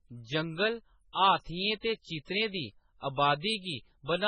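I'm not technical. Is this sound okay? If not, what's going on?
No. MP3 compression runs through the whole clip: the speech sounds watery and dull, with nothing above about 9.4 kHz, likely from squeezing the file very hard.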